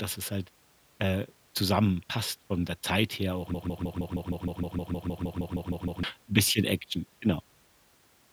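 From 3.54 s to 6.03 s the speech locks into a broken-record loop: a fragment of about 156 ms plays 16 times back to back, an exact stutter, before the sound resumes at "'n bisschen". The likely cause is a stalled player or stream resending its last buffered piece, so the audio meant for those 2.5 s is lost. On a waveform the same short shape tiles identically; a spectrogram shows a block of vertical stripes repeating every 0.16 s.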